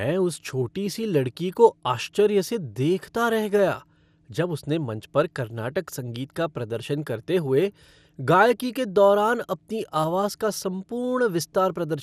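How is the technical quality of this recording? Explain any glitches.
The recording is held back by clearly audible lossy-coding damage that runs through the whole speech clip. From start to finish the sound is dull and gurgling, with a granular roughness sitting on the voice and no content at all above 15 kHz. This is most likely MP2 compression at a low rate, consistent with roughly 80 kbps: the encoder divides the spectrum into sub-bands and, short of bits, shuts off the top bands while quantising the rest coarsely, producing that muffled, watery grain.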